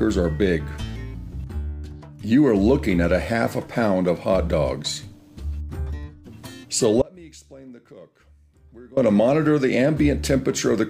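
At 7.02 s the sound drops abruptly to a faint residue, roughly 25 dB down, until 8.97 s: an audio dropout to a faint residue, likely from the signal path breaking while downstream stayed live.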